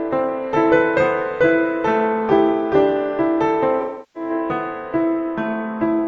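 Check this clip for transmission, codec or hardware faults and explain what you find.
There is one fault, an AAC frame loss with concealment, from 3.81 to 4.30 s. About 341 ms of coded audio went missing, which fits roughly eight AAC frames. The decoder patched the gap from the last good spectrum, so the sound there is resynthesised rather than the original.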